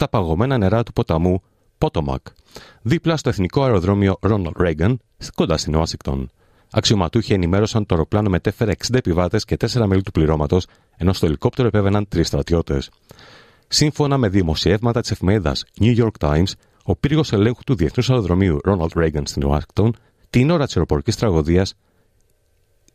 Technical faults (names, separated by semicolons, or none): none